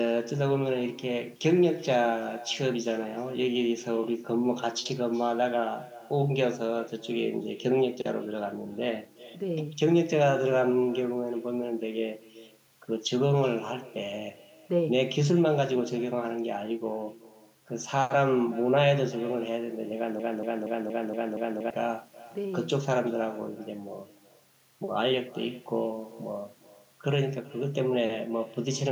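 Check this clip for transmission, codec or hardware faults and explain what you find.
Two faults are present in the speech.

Echo with no canceller, throughout: the far end's loudspeaker feeds its microphone unremoved, so every phrase returns roughly 0.4 s later, about 21 dB quieter and thin.

Broken-record loop, 20.20 to 21.70 s: a 0.23 s fragment repeats six times back to back, replacing the speech, likely from a stalled player or stream resending its last buffer.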